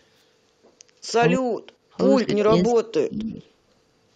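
From 1.25 to 1.82 s, 2.23 to 2.29 s and 2.65 to 3.29 s the speech dips and breaks up, most deeply in the longer two stretches. That's speech suppressed in double talk, likely the echo canceller ducking everything while both ends talked at once.

Right after, at 3.4 to 3.49 s, a very faint echo leak slips through, a copy of the voice arriving 230 ms late. It's likely a loudspeaker on one side whose echo canceller didn't fully clear what its microphone picked up.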